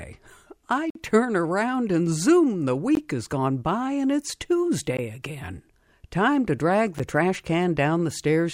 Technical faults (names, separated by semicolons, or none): gap between stream segments